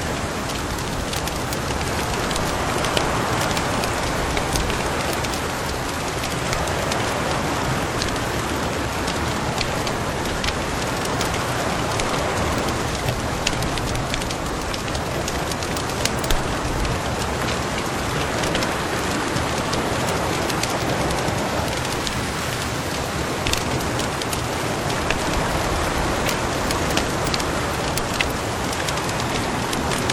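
No dropouts, clicks, distortion or level jumps are audible at any point in the clip.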